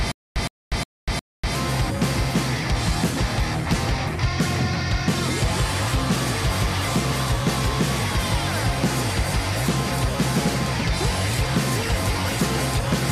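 Stutter with silent gaps, 0 to 1.55 s: a 115 ms burst returns four times every 359 ms, likely a stalled stream replaying one fragment.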